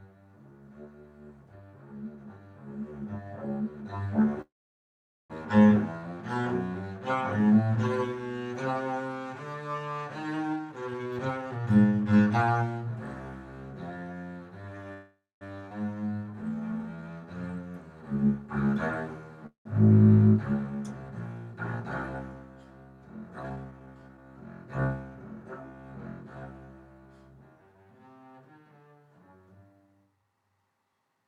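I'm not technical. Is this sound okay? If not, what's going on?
No, it has a few hiccups typical of a shaky internet call.

Call audio freeze: at 4.41 to 5.32 s, 14.93 to 15.43 s and 19.47 to 19.67 s the sound stalls, briefly buzzing then going quiet (nearly a second of silence in the first), likely because data got held up in transit. Afterwards it resumes right where it stopped, so nothing is lost, just delayed.

Jitter buffer speed-up: from 10.54 to 12.63 s the sound plays about 1.4 times faster at normal pitch, trimming roughly a second, and 30.04 to 31.23 s does much the same. From 21.73 to 24.18 s it's only slightly rushed, at 107%. The receiver is clipping tiny slices to catch up after built-up delay.

Skip ahead: at about 15.7 s playback jumps forward almost seamlessly, dropping roughly a fifth of a second of sound. That chunk simply never gets played, so the two sides butt straight together.

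Jitter buffer slow-down: right after, from 15.95 to 17.27 s, the sound drags at about 84% speed, same pitch, stretched by 0.22 s. The receiver repeats tiny bits to rebuild its reserve, which can make things sound drawn out or slightly wobbly.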